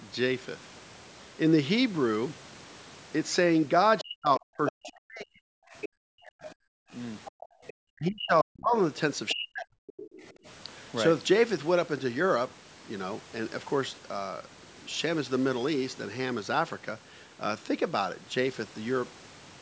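From 3.99 to 7.73 s a second voice leaks through, about 10 dB below the talker. This is the other side's voice leaking through, likely loudspeaker echo the echo canceller failed to remove. It returns weaker, about 20 dB down, from 9.28 to 10.29 s.

Overlapping the first leak, from 4.01 to 6.45 s, the talker's own speech is suppressed in double talk. It dips by as much as 40 dB, in pieces totalling about a second and a half. The likely cause is the canceller turning everything down while both sides speak. The same happens again from 7.89 to 9.77 s.

Between 6.73 and 7.61 s the background is gated by the echo canceller. Room sound drops by about 40 dB for roughly 0.4 s in total. A brief gate of about 21 dB follows at 10.33 to 10.45 s.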